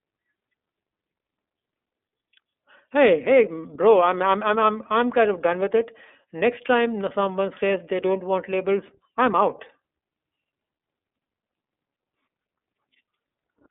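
Speech heard through a narrow, boxy band with a plainly rough, synthetic edge throughout, and nothing above about 3.8 kHz. The iLBC codec sounds like this: it codes each 30 ms frame independently over a 250 Hz to 3.6 kHz line band, which fits its 13.33 kbps mode.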